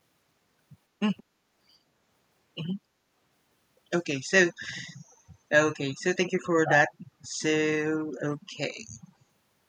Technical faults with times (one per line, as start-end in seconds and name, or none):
1.17-1.23 echo leak